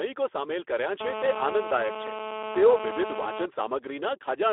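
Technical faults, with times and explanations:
Throughout: Speex codec. The speech has that hoarse, noisy CELP texture, plainly audible damage from a low bitrate of around 11 kbps. It sits in a phone-style 300 Hz to 3.5 kHz band, with nothing at all above 3.8 kHz, so it sounds boxed-in and thin.
1.01–3.46 s: GSM phone buzz. A hard, raspy buzz at about 217 Hz with lots of harmonics cuts in and stays steady, about 6 dB below the speech. That steadiness points to a nearby 2G phone on a call, its transmit bursts getting rectified into the audio.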